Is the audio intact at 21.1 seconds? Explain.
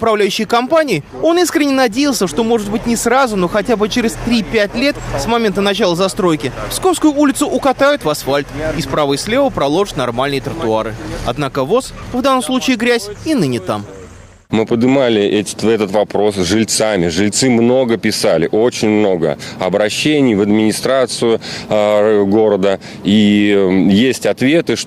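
Yes, the audio is intact at 21.1 seconds, with no dropout, click, distortion or other fault to be heard at that point.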